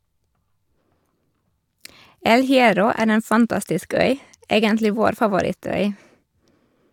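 No technical faults are audible anywhere in the speech.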